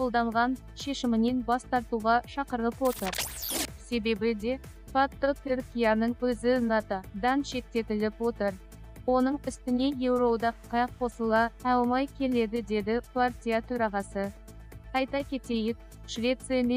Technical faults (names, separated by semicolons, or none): none